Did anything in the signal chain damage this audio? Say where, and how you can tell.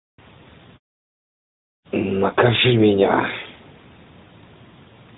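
No: the speech shows nothing beyond what an AMR narrowband mobile codec path leaves, with the band capped at 4 kHz and light coding texture that fits its 12.2 kbps mode, and muted pauses dropping the background to silence between phrases as the call processing intends.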